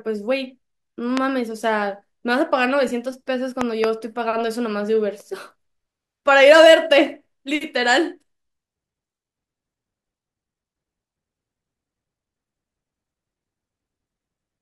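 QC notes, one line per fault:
1.17 to 1.19 s and 3.61 to 3.86 s, loud pop: one sharp pop, then two in quick succession, each about 15 dB above the speech, which continues underneath. The likely cause is a sudden voltage step from a switch, plug or static.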